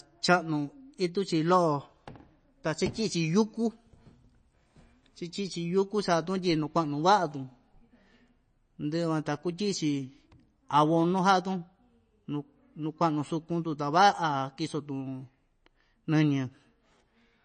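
A low-bitrate encoder, likely MP3 compression at around 32 kbps, has starved this speech recording of bits throughout. It cuts everything above 9 kHz and drops weak frequency lines frame by frame, so the sound is dull, plainly watery and swirling, with smeared attacks.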